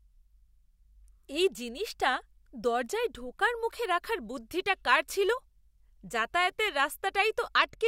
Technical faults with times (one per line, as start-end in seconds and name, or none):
7.58-7.88 Bluetooth SBC bit pool drop